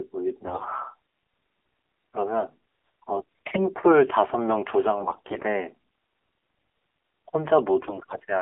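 Throughout, the speech carries the AMR narrowband mobile codec sound: nothing above about 3.4 kHz or below about 300 Hz survives, and the voice is plainly buzzy and synthetic, which fits a low AMR-NB mode near 7.4 kbps. A spectrogram shows a hard ceiling with an empty band above it.

AMR bit errors strike at 0.44–0.65 s, 3.14–3.66 s, 5.02–5.45 s and 7.81–8.23 s. Flipped low-priority bits misplace the excitation pulses and skew the fine gain and spectral values, so the voice keeps its pitch and level but turns hoarse, scratchy and gargly. The waveform envelope stays intact, while the spectrogram shows smeared, noisy harmonics in those spans.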